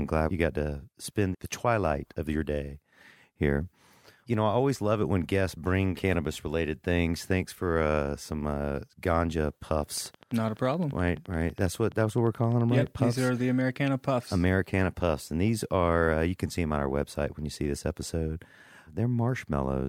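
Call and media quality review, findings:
Train of clicks, 9.98 to 13.14 s: regular ticking at 11.7 per second, about forty pulses, peaks roughly level with the speech. Likely interference or a faulty connection or power supply. Spectrogram shows evenly spaced full-band vertical lines; waveform shows similar narrow spikes, pauses included.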